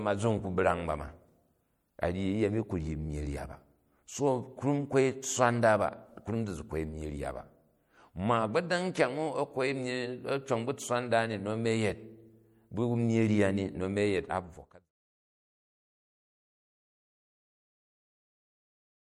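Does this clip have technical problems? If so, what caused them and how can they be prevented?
Yes. Throughout the speech there's a plainly audible watery, swirly quality, likely MP3 compression at something like 64 kbps, where weak frequency lines flicker on and off between frames. The fade-out from around 14 s to 14.92 s is smooth. To prevent it, keep a lossless master and encode at a higher bitrate.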